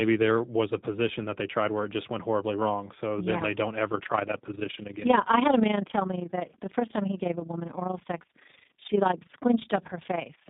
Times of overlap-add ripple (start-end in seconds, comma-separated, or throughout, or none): 3.92-10.49